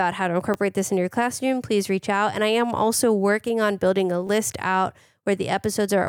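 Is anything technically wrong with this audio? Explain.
Yes, there are repeated buffers at 0.54 s and 4.27 to 4.29 s. Audio arrived late, so a roughly 10 ms chunk replays once, then twice, giving brief clicky stutters.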